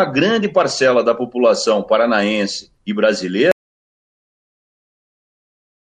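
At 3.52 s the sound cuts out into silence, with no room tone, lasting to the end. This audio dropout to silence likely came from lost input.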